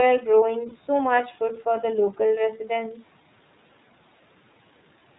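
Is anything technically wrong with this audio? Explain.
Yes. Throughout the clip the iLBC codec limits the speech to below 4 kHz and makes it slightly rough and synthetic, which fits its 13.33 kbps mode with 30 ms frames.

From 0.69 to 0.72 s, lost iLBC frames cause a gap of about 30 ms. The decoder repeats the last pitch cycle mixed with noise, so the gap sounds like a brief buzzy held vowel. The speech recovers immediately afterward.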